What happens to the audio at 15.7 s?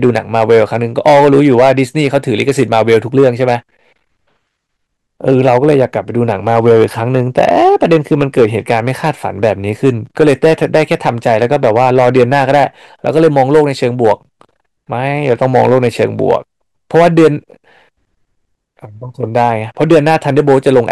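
Hard clipping, and it's not just at 15.7 s but across the whole clip: the speech is driven about 8 dB too hot, so roughly 3% of samples get sheared flat, giving a harsh crackle on louder syllables.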